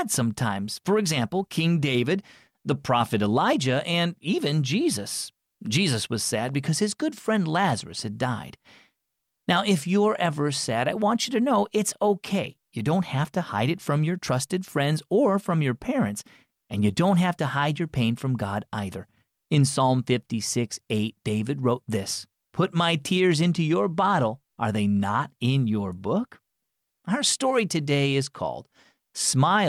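Nothing in this recording stands out as a technical fault; the speech simply runs along without any dropouts, clicks or glitches to point to.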